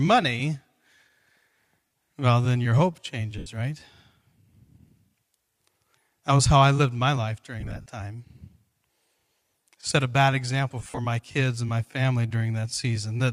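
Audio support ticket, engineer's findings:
Lost LE Audio frames: dropouts at 1.86 s (45 ms), 3.38 s after "well then your hope" (83 ms), 7.60–7.89 s after "I lived my life", and 10.79–10.99 s before "my kids and my". The last two are scattered gaps with runs around 50 ms. LC3 concealment reuses the last spectrum with random signs, giving a noisy smear that fades on longer runs. Gap sizes fit 7.5 ms frames, and the faint LC3 graininess likely comes from the Bluetooth link.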